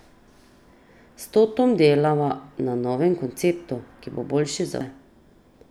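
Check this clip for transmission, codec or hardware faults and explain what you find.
Compressed frames skipped at 4.81 s: the speech jumps forward by about 300 ms, which fits roughly three whole frames of about 93 ms each going missing from the file or being rejected by the decoder as damaged. Those frames are never played, so that stretch of speech is lost.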